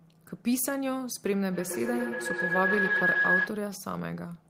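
From 1.51 s to 3.7 s the speech is overtaken by feedback howl. The sound from one device's loudspeaker is reaching a microphone on the same call and being played back louder on each trip around the loop, so the repeats build rather than decay. They narrow to a tone near 1.5 kHz, with the loop repeating roughly every 150 ms, peaking about 4 dB above the speech before it stops at 3.7 s.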